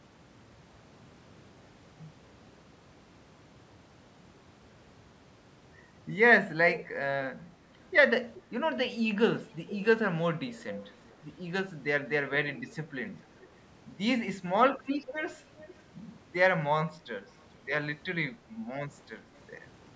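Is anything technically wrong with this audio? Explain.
Yes. There is echo leak at 6.74–6.88 s, 8.34–8.42 s, 9.69–9.77 s, 10.48–11.13 s, 13.39–13.47 s, 15.07–15.13 s and 15.59–15.83 s. A copy of the speech returns about 0.42 to 0.43 s after the original. It is mostly short scraps, with a longer stretch near 10.5 s. The copy ranges from fairly noticeable to barely audible. The likely cause is a far-end loudspeaker whose echo canceller let part of the sound reach its microphone and be sent back.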